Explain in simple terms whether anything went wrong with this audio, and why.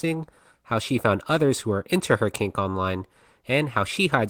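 Nothing went wrong that a listener would notice, since nothing in this recording stood out as a problem on listening.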